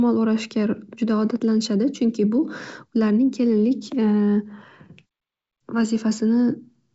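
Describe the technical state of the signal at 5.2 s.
At 5.2 s the signal is intact, with no fault audible at that moment.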